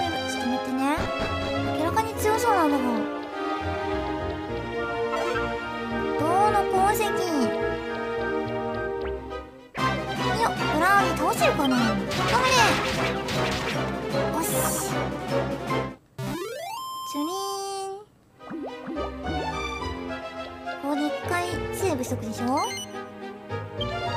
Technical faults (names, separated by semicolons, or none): none